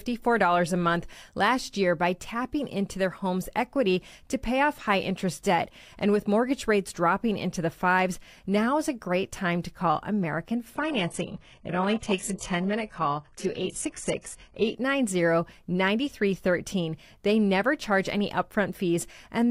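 Speech, with an adaptive stream at a lower bitrate from 10.75 to 14.75 s: the treble above 11.5 kHz vanishes abruptly, with rising codec artefacts and no gap. This points to a brief switch from roughly 96 kbit/s AAC to a 12 kbit/s HE-AAC rendition.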